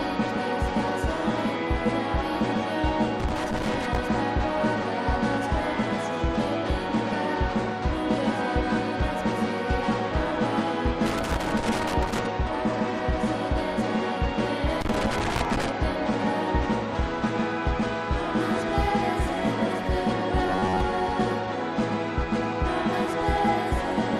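Loose connector crackle appears first, from 3.2 to 3.98 s. It returns from 11.06 to 12.26 s and again from 14.81 to 15.69 s. A worn or dirty contact is making and breaking as it moves. Each break chops the signal, and any DC on the line turns the breaks into pops. Each burst is irregular scratching and crackle, lasting just under a second to just over one.

From 20.47 to 20.81 s the sound turns rigid and metallic. A fixed buzz near 94 Hz sits over it, though it still loosely follows the original contour. This is likely robotic sound from repeated short buffers. New audio arrived too seldom, so the last short chunk was replayed to fill the gap. About half of this stretch seems to be repeats. The buzz pitch fits a buffer of roughly 11 ms.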